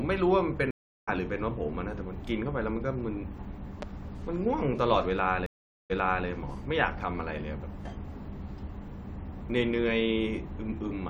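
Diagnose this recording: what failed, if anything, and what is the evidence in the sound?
Stream reconnect at 0.71–1.09 s and 5.46–6.27 s, a network-stage failure. The connection dropped, leaving 366 ms and then 435 ms of silence, and a fresh decoder restarted mid-stream. Speech resumes roughly 0.4 s further on the first time, and 372 ms earlier the second time, where the server resent a burst.

Loud pop at 3.82–3.85 s: a single sharp pulse about 10 dB above the speech, which carries on underneath. The likely cause is an electrical transient in the analogue wiring, such as a plug, switch or static discharge, added onto the signal path.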